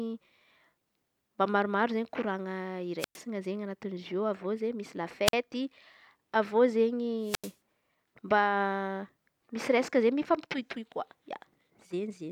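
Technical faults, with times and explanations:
2.99–3.18 s, 5.26–5.34 s and 7.22–7.56 s, wireless microphone squelch dropout: three times the speech gives way to a short burst of hiss, then a hole of near silence of about 110 ms, 48 ms and 87 ms respectively, before the voice comes back. The analogue FM radio link weakens, so noise rises as the signal fades, and once it falls below the receiver's squelch threshold the output is muted until the signal recovers.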